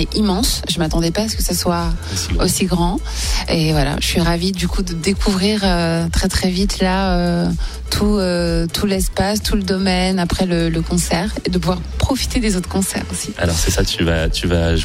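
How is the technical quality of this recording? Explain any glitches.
No glitches to report: nothing in the recording points to a technical fault at any point.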